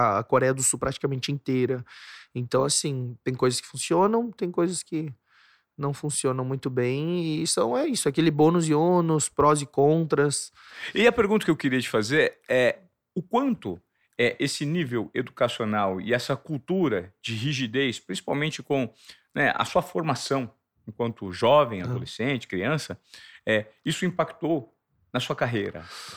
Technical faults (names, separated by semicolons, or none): resampler restarted on every block